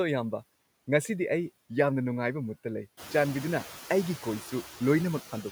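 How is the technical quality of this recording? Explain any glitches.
The recording is marked throughout by noise suppressor artifacts. The suppressor estimates the steady background in each frequency band and pulls it down frame by frame by about 15 dB, so the noise sinks in the gaps between words and comes back up underneath them. On a spectrogram, the background bands darken in pauses and refill beneath each speech burst. The waveform's noise floor pumps in step with the talking. The room noise itself rises by about 13 dB at roughly 3 seconds and settles about 16 dB below the speech.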